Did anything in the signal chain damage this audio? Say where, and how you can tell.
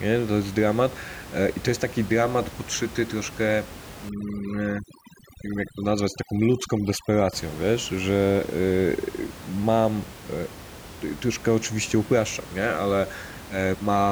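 Yes: overdone noise removal from 4.09 to 7.33 s, in call processing. Bands near the noise estimate, about 16 dB below the speech, are gated off, leaving twinkling specks.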